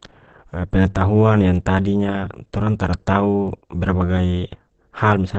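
Throughout, the speech sounds muffled and hoarse, with nothing above 8.4 kHz, likely Opus compression in its speech mode at a low bitrate, around 16 kbps.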